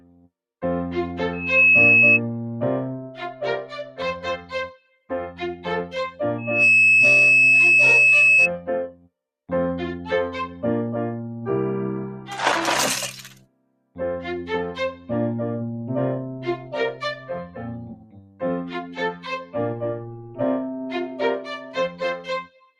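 A noise suppressor built for speech stays active for the whole clip, treating sustained parts of the sound as noise. Level swings by roughly 10 dB as held material and decays are pulled down while attacks pass, so the audio pumps and thins.

The sound is cut by the noise suppressor at 0.0–0.3 s (about 17 dB), 3.0–4.0 s (about 13 dB) and 4.37–5.65 s (about 15 dB), where steady passages sink and tails end early.

From 6.38 to 8.50 s, loudspeaker feedback squeal takes over: the microphone hears the speaker it drives, and loop gain above one at 2.6 kHz lets that tone swell within about a third of a second into a squeal around 10 dB above the sound.

Further cuts follow at 8.6–9.09 s (about 15 dB), 13.11–13.98 s (about 17 dB), 14.94–15.1 s (about 9 dB), 16.37–20.4 s (about 17 dB) and 20.75 s to the end (about 16 dB), the long ones leaving the sound sinking in level.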